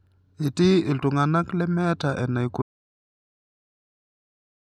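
An audio dropout to silence starts at 2.62 s in this speech clip, right after "iltung'ana lemeeta", and lasts the final 2.0 s to the end. The signal drops to silence with no room tone, most likely because the input device or link was lost while recording continued.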